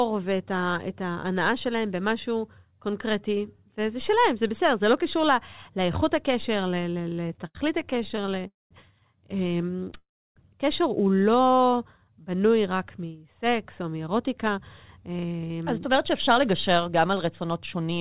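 Repeated stalls (stutter) run from 6.98 to 9.93 s. Packets kept arriving late, so the jitter buffer ran dry about 35 times, and the receiver stretched the last sound over each wait until fresh audio came in. Together these patches fill 425 ms, about 14% of the stretch, and the longest lasts 82 ms. Nothing is lost, but the speech lurches forward in small hitches. All of it is band-limited with nothing above 4 kHz, which fits a narrowband telephone codec.

A call audio freeze falls inside that stretch, from 8.47 to 8.73 s, and a second follows from 9.97 to 10.38 s. Each time the sound hangs, decays, and then goes quiet, for about 180 ms of silence in the first and 310 ms in the second. Afterwards the speech resumes where it stopped. The likely cause is packets held up in transit, emptying the buffer and inserting 233 ms and 384 ms of delay.

A jitter buffer slow-down covers 11.64 to 12.48 s. 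To rebuild its reserve, the receiver repeated single pitch periods, adding 75 ms so that the speech plays at 92% speed with its pitch unchanged. Sounds come out drawn-out and slightly dragged. Right at its start, from 11.66 to 11.77 s, three more tiny stutter gaps totalling 24 ms appear, none longer than 12 ms.

A jitter buffer speed-up runs from 13.97 to 17.99 s. Excess audio had built up in the buffer, so the receiver trimmed short pieces of pitch periods repeatedly, cutting roughly 0.3 s in all. The speech plays at about 106% speed at its normal pitch and sounds slightly rushed.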